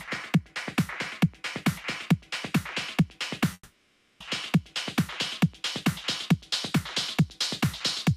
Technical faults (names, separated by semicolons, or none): call audio freeze